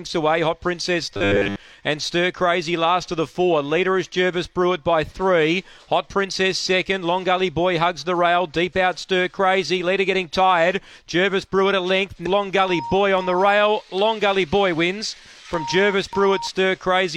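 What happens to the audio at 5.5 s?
Nothing goes wrong at 5.5 s; the audio plays through that moment intact, with no dropout, click, distortion or other fault.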